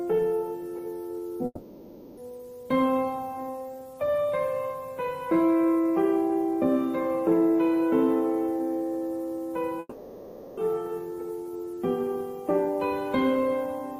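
From 1.45 to 2.20 s the sound breaks off and is replaced by a smeared, fading continuation of the last moment for about 0.72 s, ending in a brief silence before the audio resumes further along, with 0.72 s never heard. The same happens from 9.79 to 10.60 s, with about 0.78 s filled and lost. Both are likely a long network dropout, with the receiver's concealment extending the final audio until data returned.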